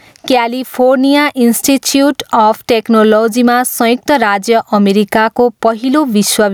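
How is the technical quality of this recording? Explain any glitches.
The recording suffers from gain pumping throughout. The gain is pulled down on each loud sound, a swing of roughly 15 dB, so loud and soft parts end up closer in level. This is likely from input gain set far too high with a fast limiter clamping it. On a waveform the envelope looks flattened and squashed.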